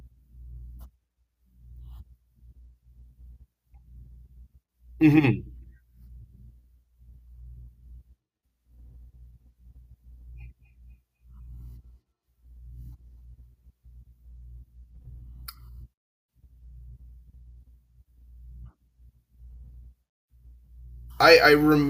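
Speech with feedback echo between two devices from 10.65 to 13.16 s: faint repeats roughly every 0.3 s, about 61 dB down, visible as evenly spaced ghost copies on a spectrogram.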